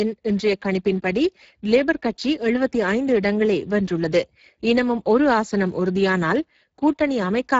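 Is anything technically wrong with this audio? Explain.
Yes, the Speex codec has plainly audible damage through the whole clip. The speech sounds noisy and hoarse, which fits a low bitrate of around 10 kbps that starves the excitation signal. Nothing comes through above 7.6 kHz, and the upper band is a thin, noise-like fill.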